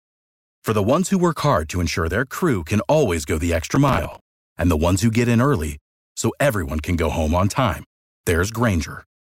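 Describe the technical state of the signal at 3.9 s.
At 3.9 s the speech is hit by processor overload crackle, running from 3.76 to 4.20 s, between "can always go the" and "and the ones who". The processor is missing its buffer deadlines over and over. Each miss replays a scrap of old audio with hard edges. The buffers are roughly 10 ms, with around fifteen missed, heard as a gritty tearing. The crackle stops once the load eases.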